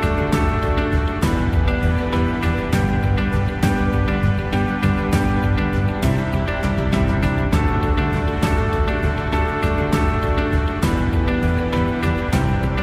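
Nothing in the audio stood out as a technical problem on listening.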